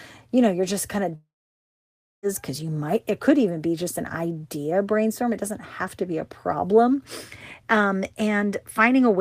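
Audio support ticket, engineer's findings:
Speech cuts after "you're just kind of", 1.15–2.26 s; likely long network dropout. About 1.08 s lost, concealment buzz fades into roughly 0.96 s near-silence; spectrogram shows smeared tail then blank gap until "cuz you might it".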